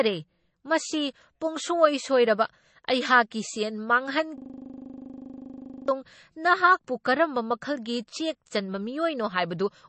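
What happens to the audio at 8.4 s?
At 8.4 s the speech carries the same MP3 compression damage heard across the whole clip: plainly audible watery, swirling artefacts as weak frequency lines drop in and out between frames, and nothing above 8.3 kHz, which fits a likely low bitrate around 32 kbps. A simple low-pass filter would only dull the sound without that swirl.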